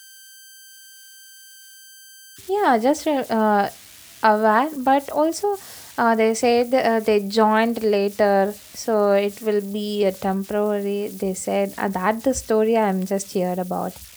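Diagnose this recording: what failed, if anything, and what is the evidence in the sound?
Converter idle tones run throughout the speech, a whistle near 1.5 kHz in pauses and grainy noise roughly 26 dB under the speech. An undithered delta-sigma converter is cycling into repeating bit patterns.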